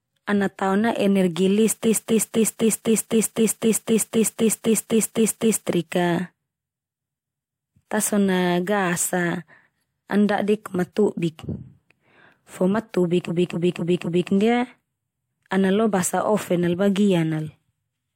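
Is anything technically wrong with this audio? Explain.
Yes. Repeated frames occur at 1.83–5.67 s (just after "ana tao na energi"), 7.17–7.68 s and 13.27–14.29 s. A 256 ms block, which fits six compressed frames, plays again 15, 2 and 4 extra times, producing a rhythmic stutter and adding 3.84, 0.51 and 1.02 s.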